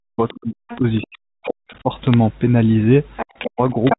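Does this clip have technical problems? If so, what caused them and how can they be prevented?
Yes. Between 0.04 and 1.89 s the speech repeatedly sinks, thins or breaks into pieces, with dips reaching around 40 dB and roughly one and a half seconds affected in total. It happens again from 3.45 to 3.96 s. This is speech suppressed in double talk, likely caused by both parties talking at once. The echo canceller could not tell the talker's voice apart from the loudspeaker echo, so it attenuated everything. Prevention: use an echo canceller with proper double-talk detection, or a headset, so suppression is not triggered.

A second, quieter voice comes through in scraps at 0.28–0.38, 0.70–0.79, 0.96–1.07 and 1.45–1.51 s, then over longer stretches at 3.16–3.50 and 3.67–3.97 s. It starts faint, about 25 dB under the speech, and grows to only about 5 dB below it by the end. This is the other side's voice leaking through, likely because the device played that side on a loudspeaker and the echo canceller left residue in the microphone signal. 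Prevention: a headset, or a better-converged echo canceller with lower loudspeaker volume, stops this leakage.

From 2.07 to 2.14 s there is a brief cluster of bit-error hits laid over speech that is otherwise unchanged. These are bit errors on a digital phone line. A small fraction of a percent of bits were flipped on the G.711 A-law link, and each flip corrupts a single sample. When the flipped bit is the sign bit of a loud sample or a high-order bit, that one sample jumps and produces a click. Prevention: fix the faulty link or add error protection on the transmission path.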